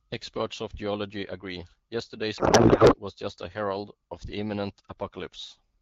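From 2.37 to 2.95 s a codec payload misread turns the speech into garbled noise and warble that barely follows it. Octet-aligned AMR-WB frames were read as bandwidth-efficient, shifting every field. Unlike loss concealment, which fades or repeats, this stays active but wrong.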